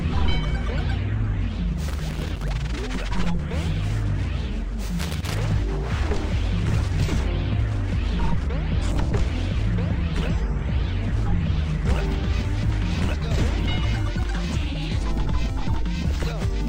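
Loose connector crackle first appears from 1.88 to 2.49 s and returns from 4.99 to 5.37 s. A worn or dirty contact in the signal path is shifting, so the connection keeps opening and closing many times within each burst. Each break chops the audio, and any DC sitting on the line turns the reconnections into pops. The result is an irregular, scratchy crackle laid over the sound, about 0.6 s long the first time and 0.4 s the second.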